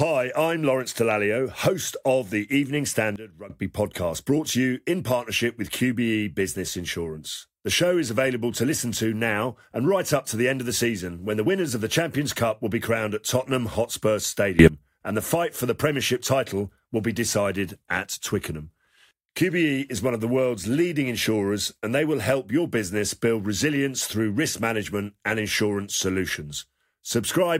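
Sudden gain jumps in this speech clip: from 3.16 to 3.50 s the level drops by about 16 dB, and from 14.59 to 14.68 s, just before "and the fight for", it rises by about 22 dB. Speech and background noise shift together, likely a gain setting applied without a ramp.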